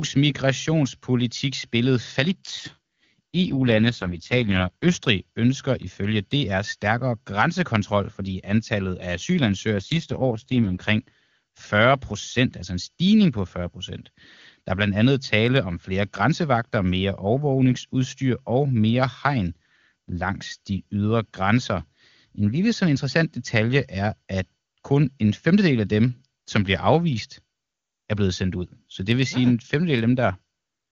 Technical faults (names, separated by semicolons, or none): AMR rate drop